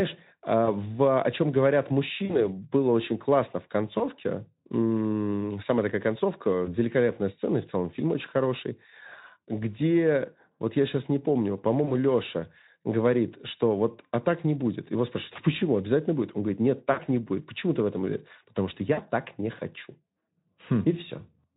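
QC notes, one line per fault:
0.66–0.68, 2.25–2.44, 3.97–4.05, 6.66–6.74, 11.85–11.92, 15.33–15.37, 16.91–17.00, 18.93–18.98 s: VoIP packet loss concealed by the speech codec. Each is a short buzzy or noisy, smeared patch that fades, the longest right after "говорит нет". The Speex decoder filled 20 to 60 ms gaps by extrapolating its last pitch and filter at falling gain, so the audio stays weak for a few frames after packets return.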